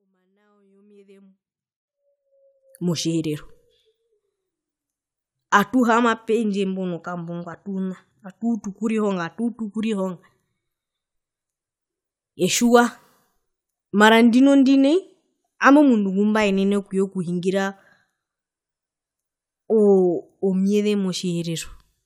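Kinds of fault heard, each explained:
Nothing stood out on listening to this speech recording.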